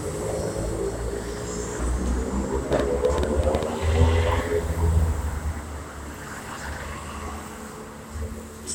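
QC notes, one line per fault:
2.73 to 3.64 s, train of clicks: a burst of about seven sharp, similarly shaped pops at roughly 7.8 per second, unevenly spaced and standing well above the sound, around 15 dB louder. The matching click shape and repetition over almost a second, rather than one isolated tick, point to a likely cause in electrical interference or a faulty connection or power supply.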